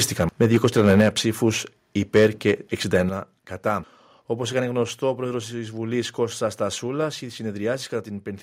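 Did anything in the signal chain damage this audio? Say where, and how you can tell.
Yes. Microphone overload at the converter: from 0.2 to 1.09 s, 2.15 to 2.51 s and 2.95 to 3.0 s the loudest peaks go flat-topped and crackly, pushing about 5 dB past full scale in the first two and about 1 dB in the last. A few percent of samples get sheared off, likely from input gain set too high.

Microphone volume stepped down, in call processing: the level drops abruptly at 1.01 s by about 4 dB, at 3.09 s by about 7 dB and at 4.83 s by about 2 dB, with the background stepping down too. That's likely auto gain control cutting the device's input volume after those clipped stretches.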